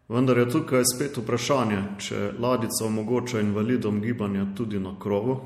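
From start to finish the speech carries plainly audible coding damage. Nothing comes through above 15.4 kHz, so the top end stops abruptly. Sibilants sound swirly and metallic, and consonant attacks are smeared. The likely cause is MP3 compression at a tight bit budget, which fits a rate near 64 kbps. Short of bits, the encoder cuts the treble at a fixed point. It also drops weak frequency lines that flicker on and off between frames.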